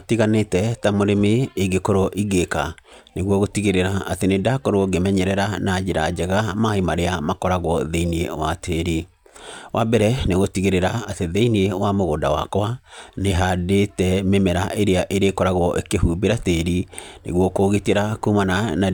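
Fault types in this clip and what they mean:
No technical faults can be heard anywhere in the recording; the speech signal stays continuous and stable throughout.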